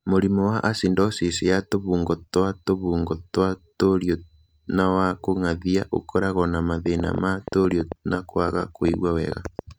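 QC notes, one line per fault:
6.86–9.60 s, train of clicks: right after "wa kũng'athia ũkoragwo na" a run of sharp, same-shaped pops starts ticking over the speech and carries on into the gaps, around twenty of them at an uneven pace averaging about 7.3 per second. They poke out roughly 10 dB above the speech, so they're hard to miss. The likely cause is something outside the sound itself, like interference from nearby gear or a faulty connection or power supply firing repeated pulses into the signal.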